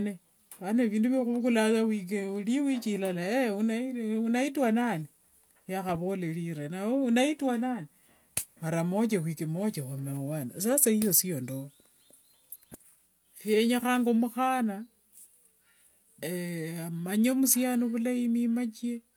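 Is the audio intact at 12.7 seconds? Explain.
Yes, the speech at 12.7 seconds is intact, with no audible fault at that moment.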